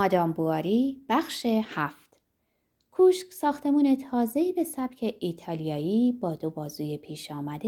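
Nothing faulty turns up anywhere in the speech on a careful listen.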